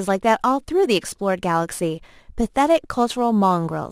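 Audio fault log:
Throughout, crude rate conversion: a gritty, inharmonic fizz trails the speech, sitting about 30 dB down. It fits a 48 kHz to 44.1 kHz change done by grabbing nearest samples without filtering.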